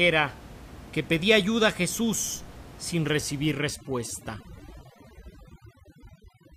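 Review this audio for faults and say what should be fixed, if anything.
From 3.50 s to the end of the clip at 6.57 s, the speech shows overdone noise removal: a noise reducer set too aggressively starts gating individual frequency bands whenever they sit near its noise estimate. The room noise, which runs about 19 dB below the speech before this point, drops and breaks up into twinkling specks, and the quieter parts of the voice are stripped with it. On a spectrogram the background turns black, scattered with isolated bright dots, and speech harmonics look ragged and patchy. Reduce the noise suppression strength or lower its threshold so it removes less and leaves a natural noise floor.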